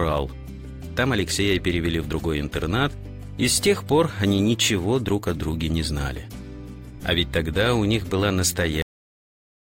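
The audio has a cut-off end at 8.82 s: the sound stops mid-event and drops straight to digital silence for the remaining 0.84 s. The final buffers were never written, so unlike a fade-out or natural ending, there is no decay or tail at all.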